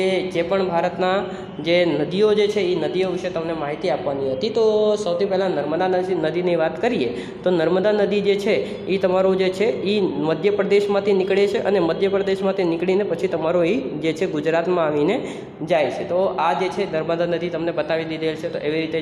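No technical faults are audible.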